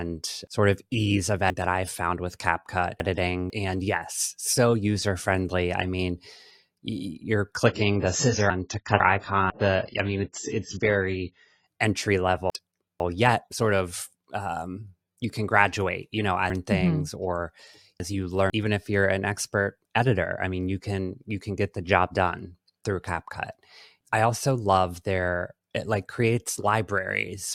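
From 1.5 to 3.5 s, chunks play out of order. A 500 ms chunk arrives three chunks late, so the sound jumps and the order is scrambled, with three hard joins. Shorter swaps, one chunk late, follow at 8.5 to 9.5 s and 12.5 to 13.5 s. A three-chunk swap returns at 16.5 to 18.5 s.

From 7.66 to 11.66 s, the audio switches to an adaptive stream at a lower bitrate. The treble cuts off abruptly above 7.7 kHz. Codec smearing rises. The change in quality fits a drop to a low-bitrate AAC version, and there is no gap at either change.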